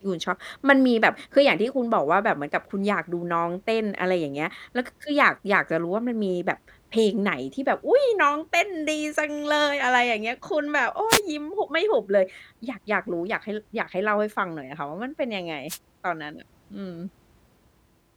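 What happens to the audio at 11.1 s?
The analogue FM radio link of the wireless microphone fades briefly as reflected signals cancel, so receiver noise rises over the speech. This wireless microphone noise hit lasts from 11.09 to 11.21 s, about 120 ms, and sounds like a short swish or burst of static.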